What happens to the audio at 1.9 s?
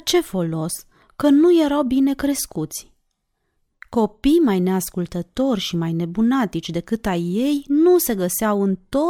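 Nothing goes wrong at 1.9 s: the speech carries on intact through that moment, with no dropout, click or distortion.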